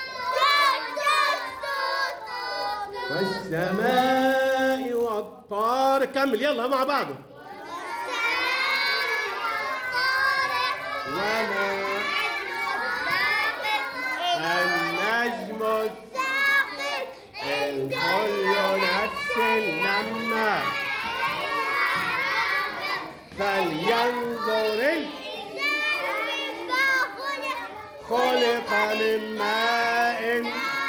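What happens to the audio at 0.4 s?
At 0.4 s the resampler is being restarted on every block, as it is throughout the clip. The sound points to a conversion from 24 kHz up to 48 kHz done on 10 ms blocks, each processed in isolation, so the converter lacks the real neighbouring samples at every block edge and leaves a small error there. Those edge errors repeat at 100 Hz, heard as a low buzz riding on the audio wherever there is signal.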